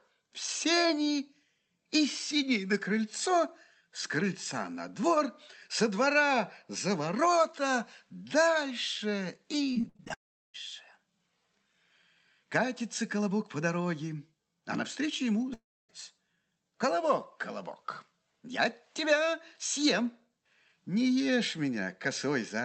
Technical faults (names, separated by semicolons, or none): repeated packet loss (robotic sound); long network dropout